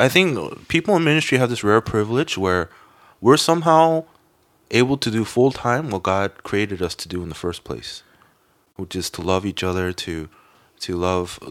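A recording of speech, with no technical fault to be heard anywhere in it. There is nothing to report at any point in the audio, so no time or cause applies.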